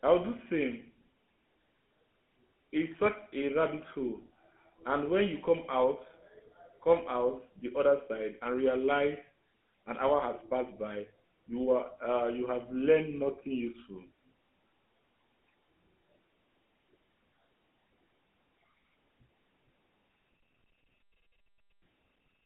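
Running through the whole speech clip is damage from the GSM full-rate codec. This early mobile codec models the vocal tract as a filter and excites it with a pulse train, coding only every third sample of that excitation at a rate that fits 13 kbps. The line band runs from 200 Hz to 3.4 kHz, so the speech sounds thin and boxed in. The coarse excitation gives it a plainly audible buzzy, gravelly roughness.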